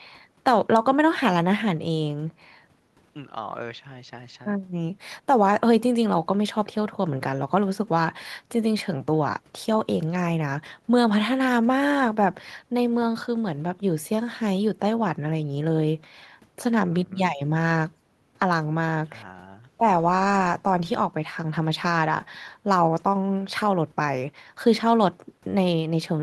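Listening closely to the speech, nothing stood out as a technical fault at any point.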